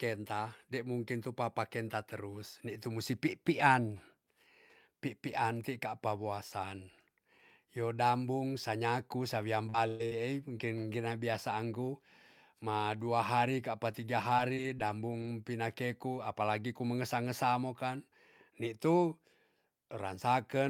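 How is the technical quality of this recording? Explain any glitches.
The recording has three network-related glitches. Between 9.69 and 10.84 s, just after "sa nyaku sa wiam", there is repeated packet loss with a robotic sound. Four packet gaps, the longest 116 ms, were patched by stretching the preceding sound, so about 20% of that stretch is concealed, leaving choppy speech with pieces missing. At 11.34 s, a lost packet was rebuilt from error correction. A low-bitrate backup copy filled the 20 ms hole without a gap, but that instant sounds briefly rougher and noisier. From 13.92 to 15.28 s, between "ma dua hari kapa" and "pinakeku apalagi ku mengesa", there are scattered short gaps. Around four isolated losses, the longest roughly 20 ms, were concealed, producing brief ticks and hiccups in otherwise clear-sounding speech.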